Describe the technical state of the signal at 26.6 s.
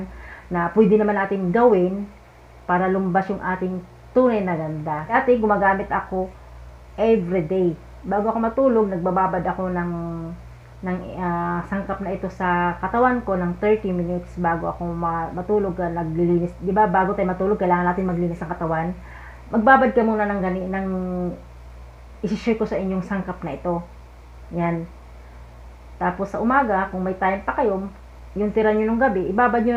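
At 26.64 s there is a single sharp click consistent with dropped samples. A handful of samples, well under a millisecond's worth, are most likely missing from the stream at that point, so the waveform jumps straight from one value to a later one instead of moving through the intermediate ones. The gap is far too brief to remove any audible sound; the discontinuity itself produces the click, which shows as a thin vertical line across the spectrum.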